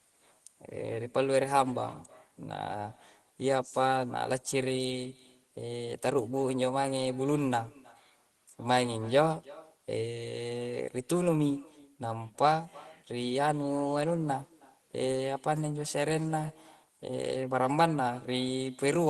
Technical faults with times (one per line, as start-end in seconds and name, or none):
0.00-19.10 echo with no canceller